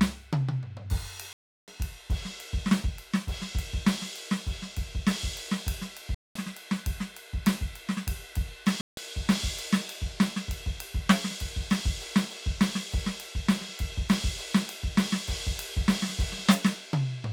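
The music cuts out three times, most likely a Bluetooth dropout, with packets failing to reach the headphones in time and being discarded. From 1.33 to 1.68 s about 350 ms of music vanishes into silence, then from 6.15 to 6.36 s about 210 ms, and from 8.81 to 8.97 s about 160 ms. Each gap has abrupt or briefly faded edges, and the music resumes further along, as though it had kept playing through the hole.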